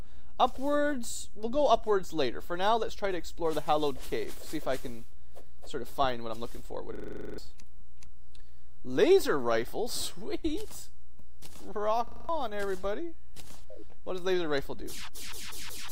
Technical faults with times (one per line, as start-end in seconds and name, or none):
6.95-7.38 system hang loop
12.07-12.29 system hang loop